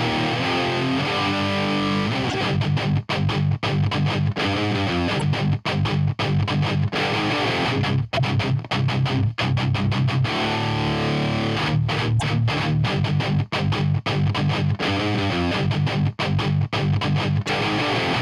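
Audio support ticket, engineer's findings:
Broken MP3 bit reservoir, 2.29, 5.19, 8.17, 12.19, 17.46 s: audio skips ahead with 30 to 60 ms glitches, likely dropped 26.1 ms frames leaving following frames reading foreign reservoir bytes.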